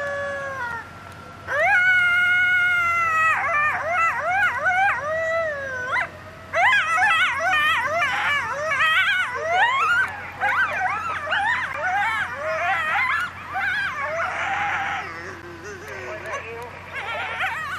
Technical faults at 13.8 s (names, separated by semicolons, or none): none